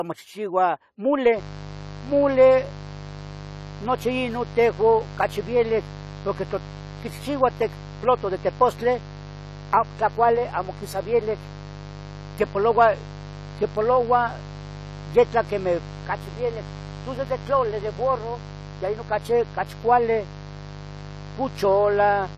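From the start, the speech sounds dull and smeared, with a warbling, fizzy texture on sibilants and nothing above 14 kHz. This is likely AAC compression at a low rate that fits about 32 kbps. A spectrogram shows a hard ceiling at 14 kHz.

From 1.35 s onward, a steady, raspy mains buzz sits roughly 15 dB under the speech. Sharp switching spikes twice per 50 Hz cycle spread harmonics up into the kilohertz range. On a spectrogram these appear as horizontal lines spaced 50 Hz apart, and the waveform carries spikes every 10 ms.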